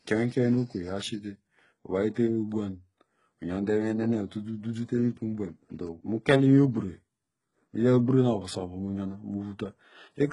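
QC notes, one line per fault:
Throughout, HE-AAC compression: the speech has no content above 11.1 kHz, and the treble beneath that cutoff sounds synthetic, with gritty, metallic s sounds and heavy codec damage. This is likely HE-AAC v2 at a very low rate, which fits a bitrate around 12 kbps. The codec keeps only the lower spectrum and rebuilds the treble by copying lower bands upward under a coarse envelope, so the upper harmonics no longer line up with the real ones.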